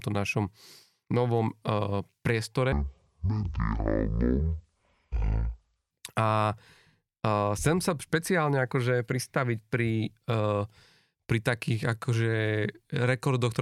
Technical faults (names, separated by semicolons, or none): section at the wrong speed